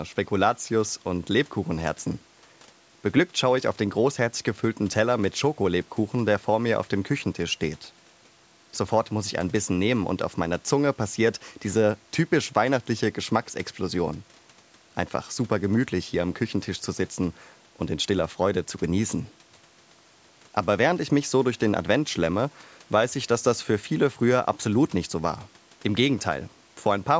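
No technical faults occur at any point in the clip, and the only processing audible is the normal call microphone path, which leaves nothing above 8 kHz.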